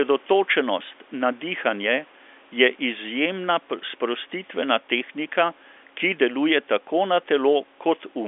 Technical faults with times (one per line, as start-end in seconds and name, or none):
none